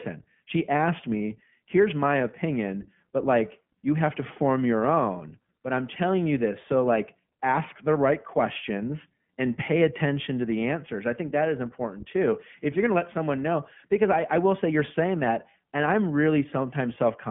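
From start to finish the speech sounds thin, boxed-in and slightly rough, with a faintly synthetic, buzzy edge and no air or sibilant brightness, since nothing passes above 3.6 kHz. This is the iLBC codec. The audio is confined to a telephone band of roughly 150 Hz to 3.4 kHz, and each short frame's excitation is coded on its own. The coarseness is plainly audible, with the codec running 20 ms frames at 15.2 kbps.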